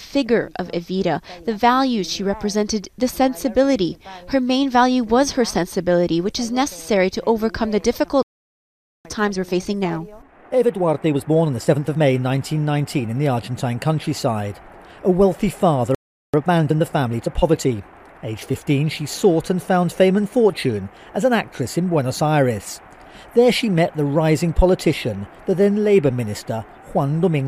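Playback stall at 8.23 s: the sound cuts to silence for 0.82 s, likely because the player ran short of data or its thread was blocked. Time-compressed catch-up follows from 9.05 to 12.05 s, with the sound hurried to 1.25 times speed at unchanged pitch as small slices are dropped and cross-faded. A second playback stall at 15.95 s leaves a 0.39 s gap, likely from the same starvation. Another time-compressed catch-up runs from 16.34 to 18.92 s at 1.15 times speed, more gently rushed.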